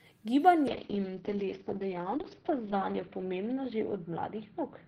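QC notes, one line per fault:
0.69 s to end: call bitrate drop. The encoder is starved of bits and codes the speech far more coarsely. The top end narrows from 20 kHz to 6 kHz, leaving a muffled, rough, watery sound that is worst for about 1.8 s. This fits a fall from around 32 kbps to 7 kbps.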